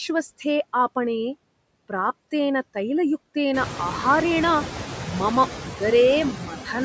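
Noise suppressor artifacts run through the whole clip. The suppressor pulls steady background down by about 20 dB in gaps, so the room noise dips between phrases and swells back beneath the speech, leaving a residue that becomes more noticeable once the room noise rises around three and a half seconds in, ending only about 9 dB under the speech.

Speech cut by the noise suppressor occurs from 6.38 to 6.68 s. The suppressor mistook part of the speech for noise and ducked it by up to about 9 dB, swallowing roughly a tenth of a second of sound so it turns faint and clipped. The call's microphone path passes nothing above 8 kHz.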